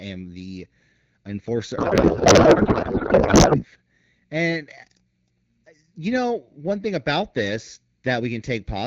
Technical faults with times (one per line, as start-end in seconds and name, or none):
1.77-3.65 codec payload misread